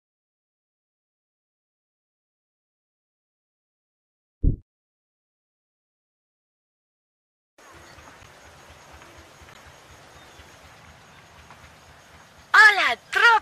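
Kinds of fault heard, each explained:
Corrupt frame decoded: two short glitches, at 8.23 s and 9.53 s, about 40 ms and 50 ms long; damaged compressed frames were decoded anyway, scattering energy to the wrong frequencies.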